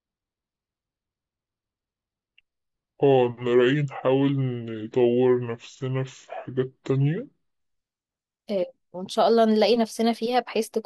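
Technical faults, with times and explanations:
0.00–7.60 s, section at the wrong speed: speech drags deep and slow, about seven semitones low, likely from playback at 0.629 times normal speed.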